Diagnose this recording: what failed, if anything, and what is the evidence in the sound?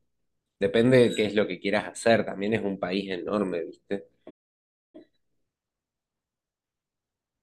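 A playback stall at the playback stage: the speech cuts out at 4.30 s and the output stays silent for about 0.64 s until 4.95 s. The waveform drops to a flat line and the spectrogram shows a blank vertical gap, most likely because the player's buffer ran dry or its thread was blocked.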